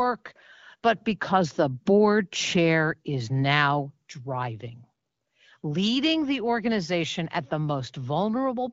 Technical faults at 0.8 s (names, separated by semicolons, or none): none